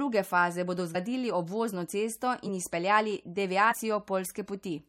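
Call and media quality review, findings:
Compressed frames skipped at 0.94 s, 2.45–2.49 s and 3.70–3.75 s; decoder drops damaged or missing frames, jumping ahead roughly 50–70 ms. Audible jump at each join.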